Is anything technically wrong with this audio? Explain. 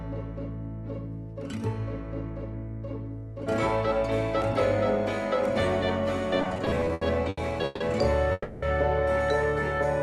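Yes, there are two faults.

From 6.41 to 7.82 s there are repeated stalls (stutter). Packets kept arriving late, so the jitter buffer emptied about fifteen times. Each gap, the longest 150 ms, was filled by continuing the last sound. That adds 430 ms, about 30% of the span, and the audio drags and stutters.

From 8.32 to 8.64 s there is a call audio freeze. The sound hangs for 300 ms as a continued, fading tail, then resumes where it stopped with nothing lost. The likely cause is packets held up in transit, which pushed the delay back by 300 ms.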